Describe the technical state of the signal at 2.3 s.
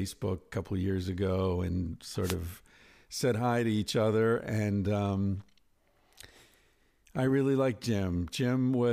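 At 2.3 s the speech is inside a wireless microphone noise hit lasting from 2.22 to 2.36 s. The FM radio link fades briefly as reflected signals cancel, so receiver noise rises over the voice and is heard as a short burst of static.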